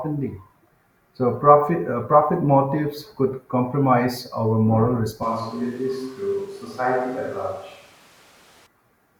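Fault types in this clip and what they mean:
switch to a distant microphone: From 5.23 s to 8.66 s the speech abruptly turns roomy and hollow with thinner bass, most likely because the recording fell back to a microphone further from the talker. Level stays roughly unchanged, but background noise rises to about 25 dB below the speech. On a spectrogram the low end thins and a noise floor fills the pauses between syllables. The waveform loses its clean silences in that stretch. Both transitions are sudden.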